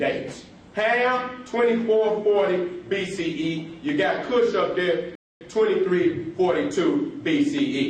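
At 5.15 s the sound drops to silence for about a quarter second, then resumes exactly where it left off: a rebuffering stall, the player starved of downloaded data.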